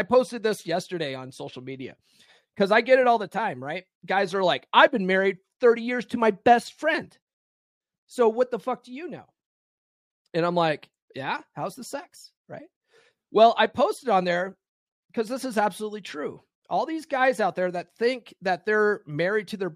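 A rebuffering stall hits at 7.34 s: the speech cuts to silence until 7.81 s, then picks up exactly where it broke off. The player exhausted its downloaded audio and waited for more, so nothing is skipped, but about 0.47 s of dead air is inserted.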